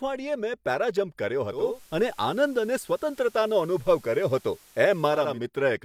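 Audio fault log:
1.45–5.43 s, digital radio blending to analogue: just after "મેં પેરાજમ્પ કર્યો" the speech picks up a faint hiss, roughly 30 dB under the voice, and shifts in level by about 3 dB. The receiver lost its digital stream and cross-faded over about 383 ms to the station's FM broadcast, whose noise floor accounts for the hiss, then blended back to digital at 5.43 s.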